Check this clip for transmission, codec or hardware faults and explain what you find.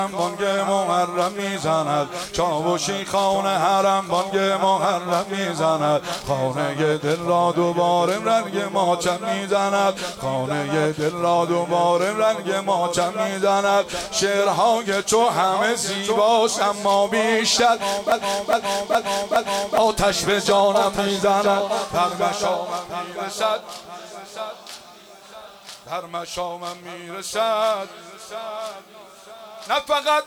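One fault stands out: a broken-record loop from 18.12 to 19.78 s. The same 0.41 s fragment plays four times back to back, an exact stutter rather than an echo, and the sound that belonged in that stretch never arrives. The likely cause is a stalled player, encoder or stream that kept resending the last fragment it held.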